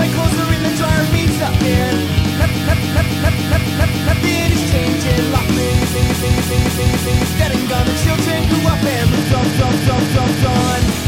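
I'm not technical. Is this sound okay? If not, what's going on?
No. The sound stutters three times, a fault called repeated frames. The same short piece, about 0.28 s long, plays over and over: six extra times from 2.51 to 4.18 s, five from 5.90 to 7.30 s, and four from 9.38 to 10.50 s. Unlike a dropout, nothing goes missing and there's no silence. The same snippet loops like a skipping record, which stretches the clip out.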